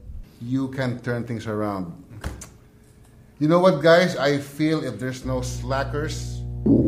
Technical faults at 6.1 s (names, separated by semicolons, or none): mains hum